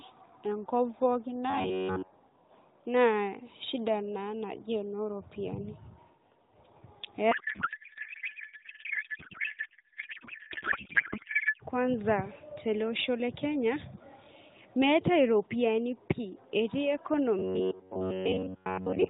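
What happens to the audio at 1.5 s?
Robotic sound from repeated short buffers runs from 1.50 to 2.10 s. The likely cause is audio arriving too seldom, so a segment of about 10.7 ms is looped over most of the span, imposing a rigid, metallic 93.8 Hz buzz that only loosely tracks the speech.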